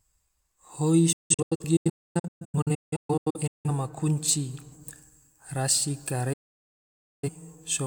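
From 1.12 to 3.70 s the speech breaks into a string of short holes, the digital broadcast dropout of a receiver muting whenever frames arrive corrupt. About 1.58 s goes missing across roughly 2.5 s, the longest gap 256 ms, each cut softened by an 8 ms fade. At 6.33 s it mutes again until 7.29 s, losing 896 ms. The waveform shows flat gaps and the spectrogram blank vertical bands across all frequencies.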